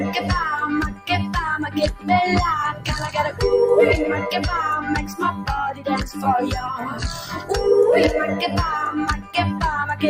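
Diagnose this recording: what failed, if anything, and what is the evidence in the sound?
Call processing left a speech-tuned noise suppressor on this audio. It keeps taking sustained content for noise and pumping it down, so the level swings by about 10 dB.

Sound cut by the noise suppressor at 0.91–1.09 s, 5.05–5.47 s, 6.84–7.5 s and 9.18–9.35 s: held parts sink about 9–12 dB while attacks get through.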